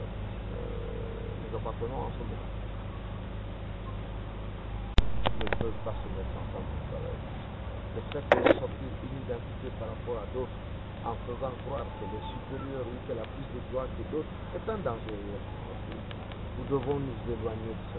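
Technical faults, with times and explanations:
No technical faults, with times and explanations, to list here.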